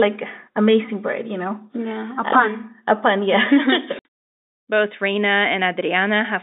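Packet loss filled with silence at 3.99 s: a 60 ms hole, likely two 30 ms packets dropped, leaves abrupt silence with hard edges inside band-limited telephone speech.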